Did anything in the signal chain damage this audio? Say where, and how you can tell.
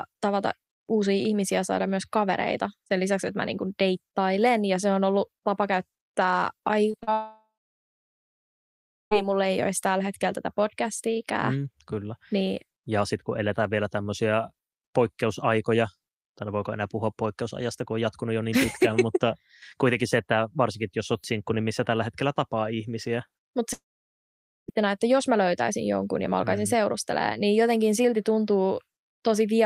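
Yes, the network leg. Short concealed packet loss shows up as a quick cluster of smeary wobbles at 6.91 to 6.95 s, 6.99 to 7.03 s and 7.03 to 7.09 s. Each gap, about 20 to 40 ms, got patched by the receiver stretching the preceding sound before blending back.

Then at 7.13 s there's a brief fading buzz, then silence until 9.13 s; the same thing happens at 23.73 to 24.70 s. The audio resumes with that stretch missing. That's likely a long network dropout: concealment ran out and nothing was played.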